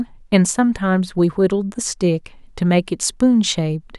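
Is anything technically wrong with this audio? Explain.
No, nothing is technically wrong with this audio.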